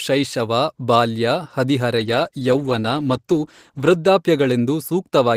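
From 1.96 s to 4.05 s the speech turns rough and watery, with a duller, muffled top end, before clarity returns. This is a call bitrate drop. The call's bandwidth estimate fell and the encoder was pushed to spend far fewer bits, so Opus coded the signal more coarsely and trimmed the high frequencies. The sound fits a fall from roughly 32 kbps to about 14 kbps, held at the lowest rate for about 2 s.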